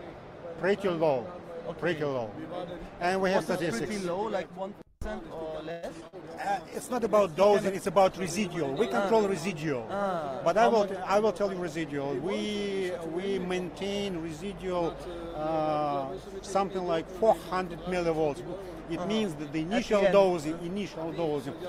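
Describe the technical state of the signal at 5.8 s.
At 5.8 s the signal is in a call audio freeze, running from 5.71 to 5.86 s. The last sound is stretched into a brief fading buzz for about 113 ms, likely because delayed packets emptied the jitter buffer. Unlike packet loss, nothing is skipped; the audio then resumes where it stopped, 113 ms late.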